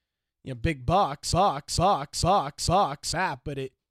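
Right after "you know big", at 1.32 s, a broken-record loop begins: a 450 ms fragment repeats exactly, back to back, four times until 3.12 s. The likely cause is a stalled player or stream resending its last buffer, so the speech that belonged there is lost.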